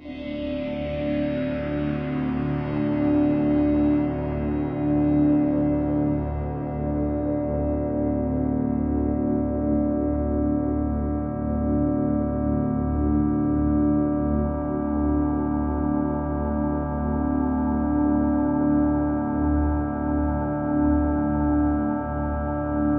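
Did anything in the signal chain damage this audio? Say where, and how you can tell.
No, nothing along the chain seems to have touched these sounds, and there's no stage I'd point to as doing any harm.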